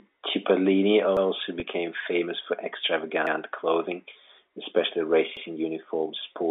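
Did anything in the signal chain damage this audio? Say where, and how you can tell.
Yes. A stutter repeats at 1.17, 3.27 and 5.37 s. Overlapping chunks in the buffer stage replay 100 ms at each join, every 2 s.

A brief buzzy hold at 1.60 to 1.62 s is packet loss with pitch repetition. About 20 ms dropped on the network, and the receiver looped the last pitch period to fill it.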